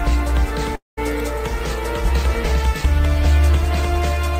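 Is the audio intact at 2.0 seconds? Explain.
Yes, at 2.0 seconds the audio is intact, with no dropout, click, distortion or other fault audible at that moment.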